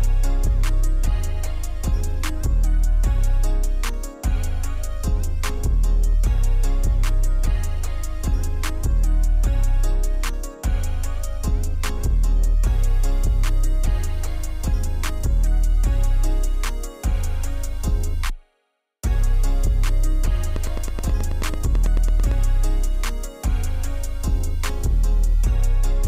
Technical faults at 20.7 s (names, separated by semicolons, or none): train of clicks